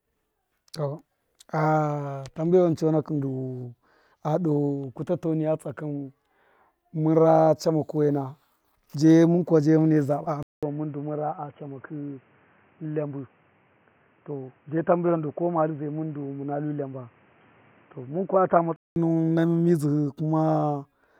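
Right after "kuwa je mune saba", at 10.43 s, a 200 ms gap lands and the speech turns dull and boxy, cut off above 3.2 kHz, a bit quieter, with faint new background noise. Likely the input switched to a poorer device, until 18.96 s, before "nuwun na".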